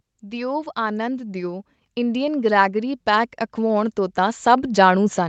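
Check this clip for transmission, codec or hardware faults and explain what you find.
One fault stands out: automatic gain rising, from 0.2 s to the end at 5.29 s. The call's automatic gain control judged the input too quiet and kept raising its gain, so the speech and the background noise swell upward together from 0.2 s to the end. The high end stops at 8 kHz, which fits the Opus call path's wideband coding.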